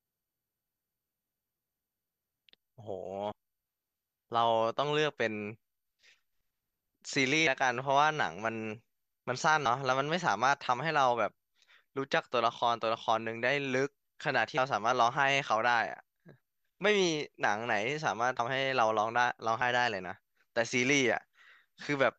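Compressed frames skipped: whole blocks of the coded speech were lost or rejected by the decoder, so playback jumps forward by a few frames at 3.31, 7.47, 9.65, 14.57, 18.39 and 19.61 s. The jumps suggest about 24 ms frames, dropped two to four at a time.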